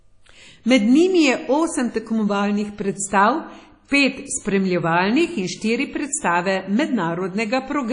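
Throughout, the speech sounds washy and ringing, with nothing above 10.1 kHz. The likely cause is WMA compression at a low bitrate, near 32 kbps.

From 3.88 to 3.92 s, pre-echo appears. Hiss leaks 38 ms ahead of an attack, because the codec spreads noise across its block. The onset smears.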